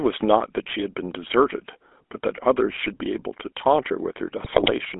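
GSM full-rate codec damage runs through the whole clip. The speech has been squeezed through a vocal-tract model driven by a sparse, regularly spaced pulse train, and the result is a plainly audible buzzy, gravelly roughness on every voiced sound. The line band sits at roughly 250 Hz to 3.5 kHz, so the low body and the upper sibilance are gone. The grain and bandwidth fit the 13 kbps GSM full-rate codec.

GSM bit errors strike from 4.44 to 4.72 s. Over those 0.28 s, corrupted bits reach the decoder and scramble the filter, pitch and gain values it rebuilds each frame from. The sound lurches into squawks, pops and gargling, with the spectrum bent and the level jumping from one frame to the next. The run of damage fits about a dozen frames hit on a link flipping roughly 4 percent of its bits.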